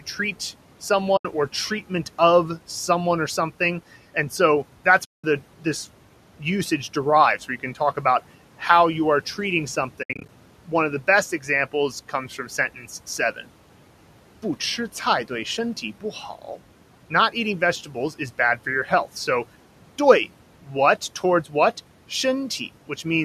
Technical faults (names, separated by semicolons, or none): AAC frame loss with muting